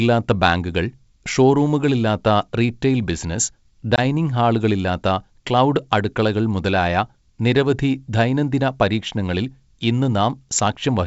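At 3.96 s the ADPCM call suffers packet loss: about one packet, 20 ms of speech, goes missing and is filled with silence. The decoder's predictor and step size drift from the sender's, so after the abrupt gap the speech returns with brief, slight distortion before settling. The G.722 wideband coding carries the speech with no more than faint coding damage.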